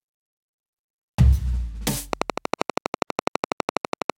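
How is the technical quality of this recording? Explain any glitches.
The recording has one clear defect: a train of clicks running through the second half of the music. From 2.13 s to 4.11 s a regular series of sharp, much the same shaped pulses ticks over the audio at about 12.2 clicks per second, around thirty in all, peaking roughly 15 dB above the music. The steady, mechanical pace points to something outside the performance injecting the pulses, likely electrical interference from nearby equipment or a faulty connection or power supply.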